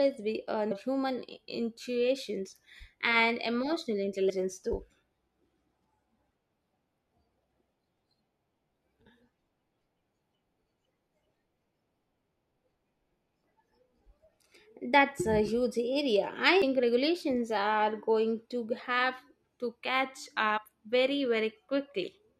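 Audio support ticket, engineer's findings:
Damaged data in a compressed stream at 0.70, 4.29–4.31 (after "human intuitions and emotional"), 7.62, 16.62 and 20.56–20.58 s. Brief glitches in speech. Decoder misreads corrupted frames, loses sync and skips to the next frame header.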